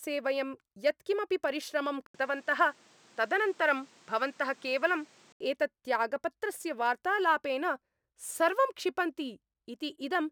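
At 2.06 s the speech cuts out for 80 ms and returns duller, with nothing above 9.6 kHz and a new noise floor roughly 30 dB down, at much the same level. Full bandwidth returns at 5.40 s, likely an input switched to a poorer device and back.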